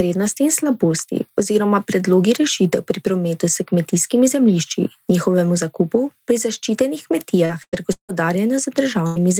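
A brief smear runs through the speech from 7.45 to 7.52 s, where about 40 ms of the call was lost. This is short concealed packet loss: the receiver extended the preceding sound for roughly 37 ms, then blended back into the real signal.

Inside that stretch, from 7.49 to 7.51 s, the audio turns rougher and noisier with no gap. The same happens at 7.73 to 7.75 s, 8.09 to 8.11 s and 9.16 to 9.18 s. Each time, a lost 20 ms packet was rebuilt from error correction, a low-bitrate copy carried by the next packet.

From 7.63 to 7.76 s a held buzz or fading hiss replaces about 100 ms of speech, and the speech resumes further on with that part gone. This burst of packet loss was filled with about 95 ms of extended, decaying sound.

From 7.93 to 8.12 s the sound stretches out and fades, and about 100 ms of near-silence follows before the speech returns with roughly 160 ms missing. The likely cause is a long network dropout, with concealment trailing off into quiet.

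A second burst of packet loss, from 9.07 to 9.23 s, again swaps about 100 ms of speech for roughly 91 ms of decaying buzz or hiss. It adds about 11 ms of extra length as well.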